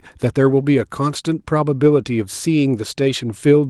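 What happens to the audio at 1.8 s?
From 1.83 to 1.89 s, a lost packet was rebuilt from error correction. About 40 ms of speech, which fits two separate 20 ms packets, was lost in transit. The Opus decoder filled the hole with the low-bitrate copies that the following packets carried, so nothing drops out. Those frames are audibly rougher and noisier. On a spectrogram, the stretch shows smeared, grainier texture with blurred harmonics below the call path's 12 kHz ceiling. The waveform stays continuous, with no flat gap.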